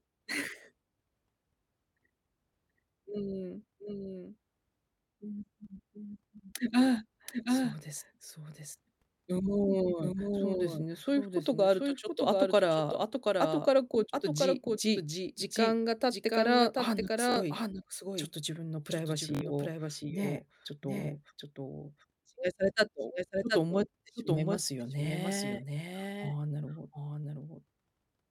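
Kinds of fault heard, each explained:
Doubled audio track: A second capture path or an out-of-step edit has likely mixed the speech in twice. A dry, full-band copy about 5 dB quieter trails the original by roughly 0.7 s throughout, with no decay or room colour.
Bluetooth stutter: Wireless audio packets arrived late or not at all, so the receiver replayed its last buffer until fresh data came. A short buzzing repeat fills 17.32 to 17.36 s (about 43 ms lost) and 19.35 to 19.41 s (about 64 ms), then the speech jumps ahead.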